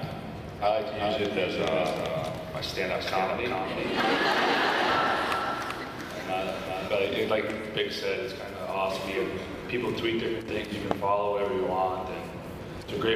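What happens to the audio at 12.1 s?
Nothing goes wrong at 12.1 s; the audio plays through that moment intact, with no dropout, click or distortion.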